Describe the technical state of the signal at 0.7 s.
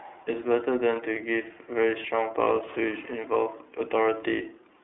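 At 0.7 s the speech carries iLBC codec damage, present across the whole clip. Each 30 ms frame is coded independently, giving a rough, synthetic edge; a spectrogram shows energy confined to roughly 300 Hz to 3.6 kHz, blank above 3.8 kHz, consistent with the 13.33 kbps mode.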